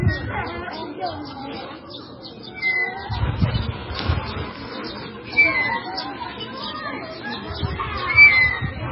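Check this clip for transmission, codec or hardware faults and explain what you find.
One codec fault runs through the whole clip: likely heavy MP3 compression, starved of bits in a way that fits a bitrate near 16 kbps. Short of bits, the encoder cut everything above 5.6 kHz and dropped weak frequency lines frame by frame, so the sound is dull, watery and swirling, with smeared attacks.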